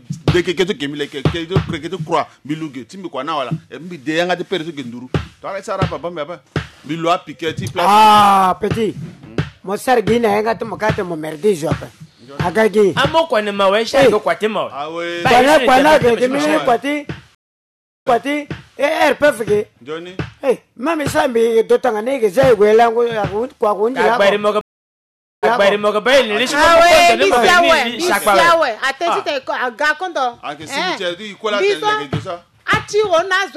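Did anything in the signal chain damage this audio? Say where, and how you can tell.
Yes, at the network stage: two stream reconnects, at 17.35 to 18.76 s and 24.61 to 26.01 s. The audio goes silent for 0.72 s and 0.82 s, then resumes 0.70 s and 0.58 s earlier, repeating material as the server resends a burst to a freshly started decoder.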